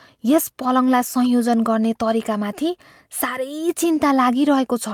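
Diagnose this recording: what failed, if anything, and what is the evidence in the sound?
Nothing in the speech stood out as a fault on listening, so there is no failed stage to point to.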